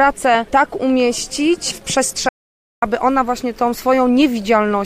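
At 2.29 s the sound cuts to total silence until 2.82 s, about 0.53 s lost. This audio dropout to silence likely came from the input disconnecting or muting briefly.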